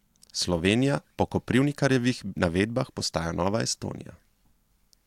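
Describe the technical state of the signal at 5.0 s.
At 5.0 s the speech signal is intact, with no audible fault at that moment.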